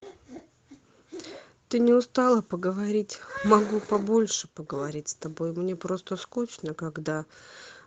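From 3.89 to 4.07 s five separate packets were lost, and the decoder rebuilt each one from the low-bitrate copy carried in the following packet, so this is a lost packet rebuilt from error correction. The rebuilt audio totals about five 20 ms packets. There is no gap or dropout, but this speech turns briefly rougher and grainier than the Opus call audio around it, which is limited to about 8 kHz, consistent with a 24 kbps stream.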